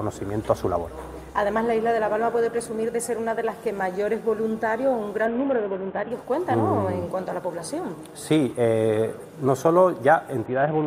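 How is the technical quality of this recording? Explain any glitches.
Two brief glitches stand out. From 5.26 to 6.11 s, and again from 10.46 s to the end, the treble dulls and a gritty noise rises: a Bluetooth SBC bit pool drop. The link congested, the phone starved the codec of bits, and the highest sub-bands got few or no bits while the rest were coarsely quantised. The sound fits the bit pool falling from 28 to 5, roughly 54 kbps.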